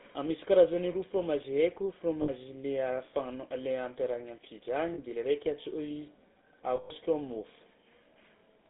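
From start to finish the speech passes through a GSM full-rate codec, and the damage is plainly audible: a buzzy, gravelly roughness over every syllable, which fits the 13 kbps full-rate coder. Its pulse-driven vocal-tract model cannot rebuild the fine detail of the voice. On a spectrogram the energy sits between 200 Hz and 3.7 kHz with a hard ceiling and an empty band above. Harmonics look smeared and grainy.

Lost GSM frames break in at 2.22 to 2.30 s (60 ms), 4.94 to 4.99 s (40 ms) and 6.76 to 6.91 s (140 ms). Each time the decoder repeats the last good frame, so the sound freezes into a rough, metallic ring. The 140 ms gap rings longest. The spectrogram shows horizontal smears of frozen spectrum.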